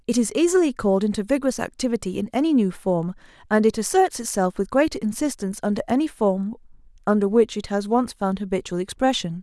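No technical faults can be heard anywhere in this speech recording.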